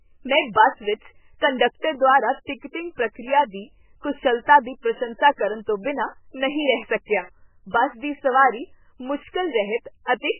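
Speech with heavy MP3 compression damage throughout. Nothing is left above 3 kHz, and the sound is watery and swirling. This likely comes from a very low bitrate, around 8 kbps.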